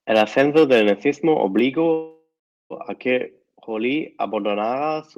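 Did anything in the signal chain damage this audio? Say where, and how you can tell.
Yes. Microphone overload at the converter, from 0.15 to 0.91 s. The loudest peaks sound harsh and crackly. They run about 5 dB past full scale, so a small share of samples are flattened. The likely cause is input gain set too high.

Microphone volume stepped down, in call processing. The level drops suddenly at 0.59 s by about 2 dB, then at 1.59 s by about 4 dB. Sound and background fall together. This is likely automatic gain control reacting to the clipped peaks.

Call audio freeze, on the network path. From 1.93 to 2.73 s the sound stalls for 0.77 s. It trails off, then goes quiet for about 0.41 s. Nothing is lost afterwards. The likely cause is delayed packets draining the jitter buffer.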